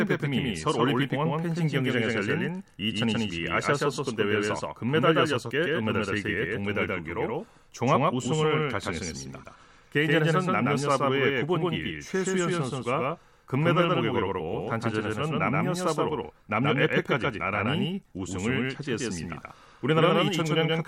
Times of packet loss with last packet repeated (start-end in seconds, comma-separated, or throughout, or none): none